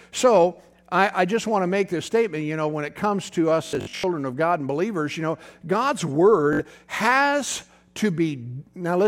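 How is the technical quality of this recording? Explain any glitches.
The recording has two Bluetooth stutter glitches in the speech. From 3.67 to 4.04 s, dropouts totalling about 264 ms are scattered across 366 ms, the longest run lasting 81 ms. A shorter 61 ms burst follows at 6.53 to 6.59 s. Late or lost wireless packets made the receiver replay its last short buffer, giving a buzzy, machine-gun repetition before the speech resumes further along. A spectrogram shows vertical striping of identical slices. The waveform shows repeated tiled blocks.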